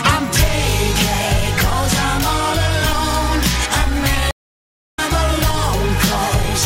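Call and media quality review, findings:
Stream reconnect, 4.31–4.99 s. Dropout of about 0.63 s, then audio resumes roughly half a second further on, so material is skipped. Probable component: network transport and player. Mechanism: connection broke, player reconnected at the live point and started a fresh decoder mid-stream, with the first resumed frame faded in.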